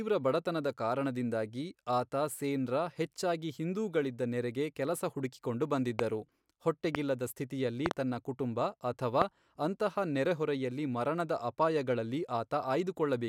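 Loud pops at 5.99–6.01 s, 6.95–6.97 s (before "ಸ್ಥಿತಿಯಲ್ಲಿ ತನ್ನ"), 7.86–7.93 s (a double pop) and 9.22–9.24 s (before "ಅಂತಹ ನೆರೆಹೊರೆಯಲ್ಲಿ ಮರಣದ ಅಪಾಯಗಳಲ್ಲಿ") jump roughly 20 dB above the speech. They are likely electrical pulses from a switch, plug or static. Unlike dropouts, the speech carries on unbroken beneath each thump.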